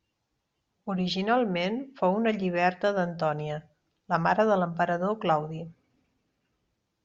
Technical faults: none

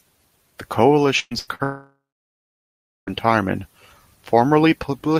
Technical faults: burst of packet loss; short concealed packet loss; long network dropout

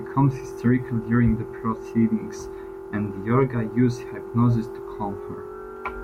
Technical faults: none

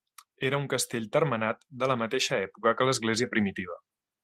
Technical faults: none

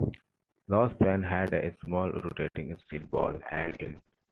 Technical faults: call bitrate drop

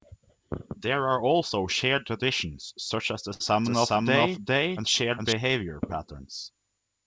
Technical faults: burst of packet loss; doubled audio track

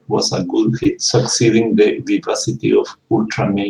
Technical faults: short concealed packet loss; lost packet rebuilt from error correction

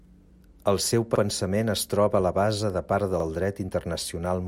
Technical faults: overlapping chunks

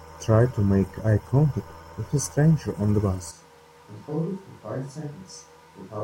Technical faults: switch to a distant microphone

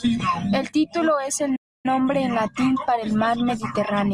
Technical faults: playback stall

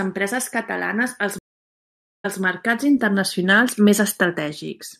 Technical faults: stream reconnect

